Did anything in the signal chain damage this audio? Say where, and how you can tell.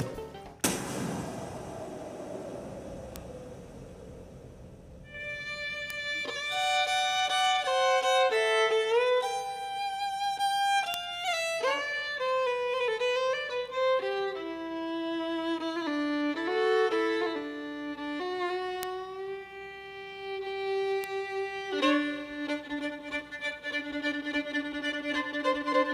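Yes. Five bit error spikes are audible, at 3.16, 5.90, 10.94, 18.83 and 21.04 s. Each is a single sharp tick, one sample long, peaking at about -12 dBFS or about -6 dBFS. The ticks are broadband and have no relation to the surrounding sound. This points to the digital stage, in memory, storage or a digital link. A flipped bit throws one sample value off by a power of two, and the next sample is correct again.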